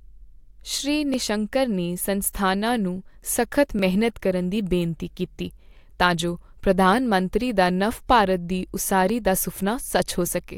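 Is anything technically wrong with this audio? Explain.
Yes. Clock drift buffer slips occur from about 1.14 s to 9.1 s: a click or pop recurs every 2.65 s, roughly four times in all, while the speech continues. The likely cause is two devices running on separate clocks that disagree by something like a few hundred parts per million. The buffer between them slowly drifts until a short block, on the order of 50 samples, is dropped or repeated, leaving a brief discontinuity at each slip.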